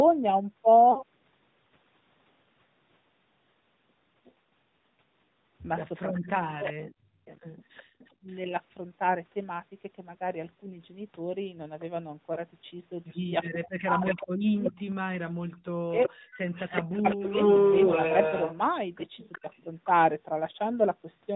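Throughout, the speech carries the AMR narrowband mobile codec at 10.2 kbps: nothing above 4 kHz, with a buzzy, synthetic edge that is plainly audible.

From 0.92 to 1.03 s, two lost AMR speech frames (40 ms) make the decoder extend the last good pitch with falling gain, giving a brief warble and dip.

At 4.25 to 4.32 s, a faint echo leak appears: a copy about 35 dB down, delayed 373 ms, likely from a loudspeaker echo the far-end canceller did not remove.

Between 6.25 and 7.28 s, speech is suppressed in double talk. The canceller, likely unable to separate talker from echo, cuts the voice by up to roughly 40 dB for about half a second.

From 7.84 to 8.26 s, the background is gated by the echo canceller. Room sound drops by about 20 dB for roughly 0.3 s in total, then returns.

At 12.34 to 12.43 s, one lost frame (20 ms) causes a short dip.

From 13.43 to 19.87 s, the echo leak returns at roughly the speech's own level, 373 ms behind it. 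From 13.63 to 17.37 s, double-talk suppression cuts the voice by up to roughly 40 dB, about 1.5 s in total.

At 16.26 to 16.31 s, a brief gate drops the background by about 18 dB.

At 19.41 to 19.47 s, a shallow double-talk dip of roughly 15 dB follows.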